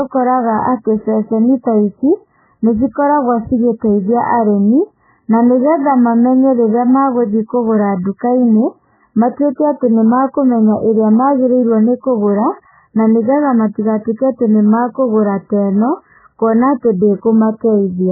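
From start to finish the speech is dull and watery. Nothing sounds above about 2 kHz. Weak detail flickers and swirls, and s sounds turn metallic. The likely cause is heavy MP3 compression, which fits a very low bitrate near 8 kbps.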